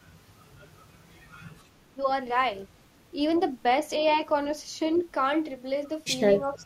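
Echo leak, from 4.94 to 5.05 s: a faint delayed copy of the speech surfaces for about a tenth of a second, trailing the original by 315 ms and sitting roughly 25 dB below it. It sounds like a ghost of the talker arriving a moment late. The likely cause is a loudspeaker on the far end whose echo canceller failed to remove everything its microphone captured, so that residue was transmitted back down the line.

Speech suppressed in double talk, from 6.42 to 6.64 s: the voice dips by a few decibels, at its deepest around 5 dB, for roughly a fifth of a second, briefly sounding pulled back and less present. This is likely the echo canceller mistaking simultaneous talk from both ends for loudspeaker echo and turning the signal down, attenuating the genuine talker along with what it took to be echo.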